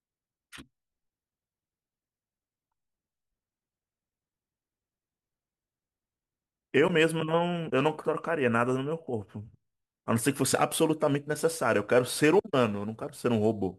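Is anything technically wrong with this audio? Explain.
Yes. From 10.52 s to the end at 13.78 s, the speech carries a crude rate conversion. The samples were stretched to a new rate by repeating the nearest existing sample, with no filtering. The pattern points to a 44.1 kHz to 48 kHz conversion. The repeats recur on a fixed cycle set by that ratio and create shifted, inharmonic copies of the voice, sitting about 25 dB below the speech. They are heard as a gritty, inharmonic fizz that rides on louder and brighter syllables.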